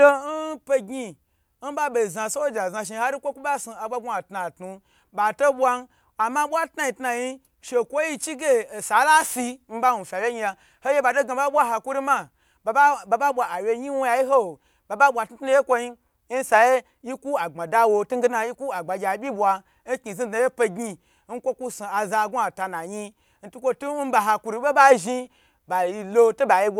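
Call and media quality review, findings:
No findings from the call and media quality review: the speech in this clip shows no audible faults.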